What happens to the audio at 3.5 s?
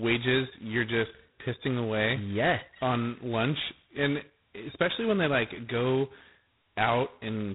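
At 3.5 s the speech carries heavy G.726 ADPCM damage, present across the whole clip. At 16 kbit/s each sample's prediction error gets two bits, so a harsh, rasping hiss rides the speech and tracks its level. A spectrogram shows a hard ceiling at 3.9 kHz with grainy noise filling the band below.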